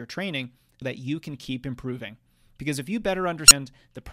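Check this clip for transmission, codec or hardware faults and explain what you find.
Two short faults, both from damaged data in a compressed stream. At 0.79–0.82 s and 3.48–3.51 s, corrupted bytes in the coded speech make the decoder misread those frames and lose sync while it hunts for the next valid frame header, producing a brief chirp or blip of roughly 30 to 40 ms each time.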